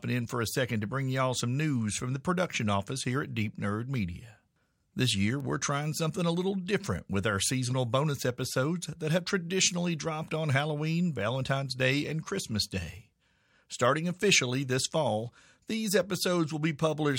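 Bit error spikes at 2.38 s, 5.40 s and 6.87 s, each a single sample knocked off by one flipped bit: sharp broadband ticks peaking at about -26, -26 and -20 dBFS.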